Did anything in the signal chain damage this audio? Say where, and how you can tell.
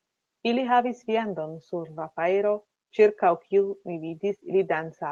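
No, nothing in the signal chain damaged this audio.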